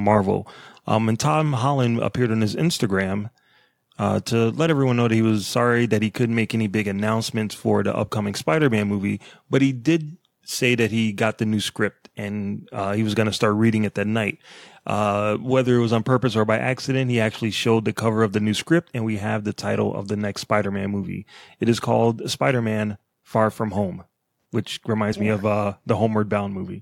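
At 23.76 s, running to about 23.81 s, there's a corrupt frame decoded. Bits in the compressed data got flipped, and the decoder played the damaged frames anyway, roughly two frames' worth. Misread codes or gains push energy into the wrong frequencies for about that 50 ms stretch, so you get a short spurious burst, a chirp, squeak, blip or noise, sitting well down in level, somewhere near -35 dBFS at its peak.

Then at 25.12 s you hit compressed frames skipped. Frames of the encoded stream never got played, either missing from the file or rejected by the decoder as damaged, so the audio lurches ahead by around 30 ms of material. What you hear is the join where the two sides meet. Depending on the codec, that's a smeared little blip where overlapping frames butt together, or a hard click at the splice.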